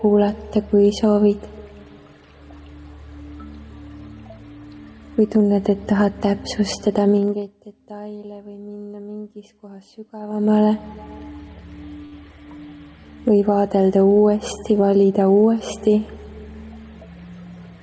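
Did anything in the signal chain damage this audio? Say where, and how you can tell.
Yes. Gain pumping runs through the whole clip. The level ducks under each loud sound, swinging by roughly 5 dB, so loud and quiet passages sit unnaturally close together. On a waveform the envelope looks flattened, and the noise floor bulges between peaks. The likely cause is input gain set far too high at the microphone stage, with a fast limiter or compressor clamping down on every loud sound.

Zipper noise appears twice. From 7.11 to 7.57 s the level falls by roughly 25 dB, and from 10.19 to 10.61 s it climbs back by roughly 25 dB. Each move is made in 2 dB steps at around 40 steps per second, with no smoothing between them. Every step adds a tiny click, so a ticking rides on the sound while the level moves. A spectrogram shows faint broadband vertical lines at regular spacing, and a zoomed waveform shows a staircase envelope. 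This points to a gain control in the processing or driver layer that updates once per buffer.

A short stall from a late packet occurs at 12.06 to 12.14 s. A packet arrived late, the jitter buffer ran dry, and the receiver stretched the last sound by 61 ms before carrying on from the same point. Nothing is lost, but one moment is held too long, with a slight buzzy sustain. On a spectrogram the preceding spectrum is smeared horizontally, and the waveform shows a repeated, slightly dipped stretch. This belongs to the network and jitter buffer stage.

A jitter buffer speed-up runs from 14.72 to 15.35 s. The buffer held extra audio. The receiver trimmed it by cutting short pitch-period-length pieces repeatedly, removing roughly 70 ms and playing that span at 109 % speed without a pitch change. The passage sounds slightly hurried. A spectrogram shows compressed timing with unchanged harmonic spacing, and the waveform shows tiny splice points. 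The G.722 call path's cutoff at 8 kHz appears as an empty band above that frequency throughout.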